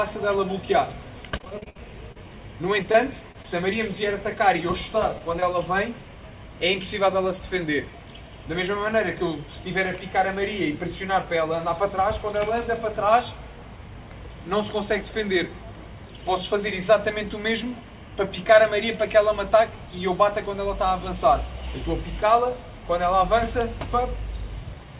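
From 1.38 to 2.25 s and again from 2.83 to 3.46 s there is repeated packet loss, giving a robotic sound. Hole after hole, the longest about 53 ms, is patched by extending the previous sound. The result is choppy and robotic rather than a single clean dropout. About a quarter of the first stretch is filled in.

Two short concealed packet losses follow, at 5.18–5.22 s and 5.40–5.44 s. Each is a single isolated gap of about 20 ms, bridged by continuing the prior sound and then blending back. Each is heard as a brief smear or wobble, not a sustained warble.

Throughout, nothing is audible above 4 kHz, which fits a narrowband G.711 call path.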